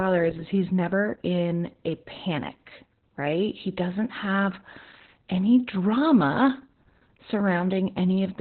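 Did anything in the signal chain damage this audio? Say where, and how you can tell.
Yes, at the codec: heavy Opus voice compression throughout, spectrogram empty above 4.3 kHz, speech muffled and hoarse from coarse narrowband SILK coding, fitting 8 kbps.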